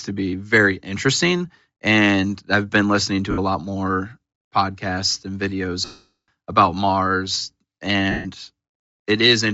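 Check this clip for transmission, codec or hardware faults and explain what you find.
Two kinds of fault are audible in this speech: codec damage throughout and three dropouts from lost frames.

Bluetooth LC3 compression runs the whole length of the clip. The damage is plainly audible: the voice has a breathy, grainy edge. That is likely the LC3 codec's behaviour at low bitrates, where much of the upper spectrum is discarded and refilled with shaped noise. The degree of damage points to a rate around 32 kbps, coded in 10 ms frames.

Lost LE Audio frames occur at 3.31 to 3.39 s, right after "I've been listening" and before "a lot more podcasts". About 70 ms is missing, which fits seven 10 ms frames. The decoder repeats the last spectrum with randomised signs, so the gap becomes a short noisy smear. A longer loss at 5.85 to 6.28 s, after "more podcasts and videos", spans about 430 ms. There the concealment starts to fade and dies away into silence. 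A third loss at 8.11 to 8.27 s, about 140 ms, smears briefly before the sound resumes.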